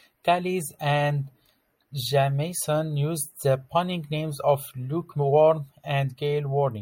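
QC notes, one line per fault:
No faults found.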